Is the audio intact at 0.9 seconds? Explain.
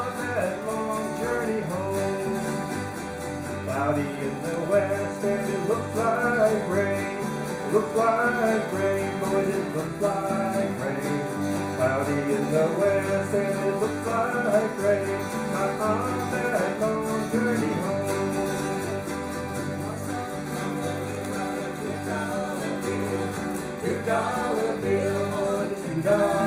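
Yes, at 0.9 seconds the audio is intact, with no dropout, click, distortion or other technical fault audible at that moment.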